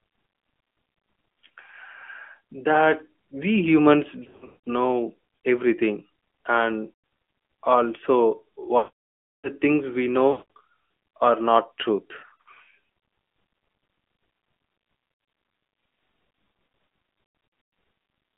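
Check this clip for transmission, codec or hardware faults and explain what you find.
Two faults are present: narrowband mobile coding throughout, and repeated losses of speech frames.

The AMR narrowband mobile codec affects the whole clip. The speech is confined to roughly 200 Hz to 3.4 kHz, with nothing above 4 kHz, and a plainly audible buzzy, synthetic edge from the vocal-tract model. This fits the 10.2 kbps mode.

Lost AMR speech frames occur at 4.24–4.57, 6.94–7.04, 8.78–9.50, 10.32–10.48, 12.18–12.48, 15.14–15.34 and 17.24–17.72 s. The decoder repeats the last good parameters at falling gain. Short or scattered gaps, with runs up to 180 ms, give dips and warbles. The 0.7 s stretch at 8.78 s smears and fades to silence.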